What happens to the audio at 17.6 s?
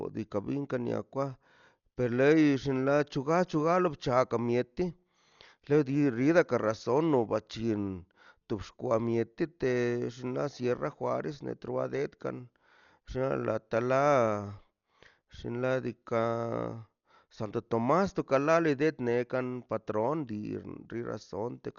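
At 17.6 s, as throughout the clip, the speech has likely been through Dolby Digital compression at a starved bitrate, consistent with roughly 48 kbps, so the encoder cut the band near 6.9 kHz and replaced unfunded spectral lines with dither noise, leaving it dull with a rough, fluttering haze.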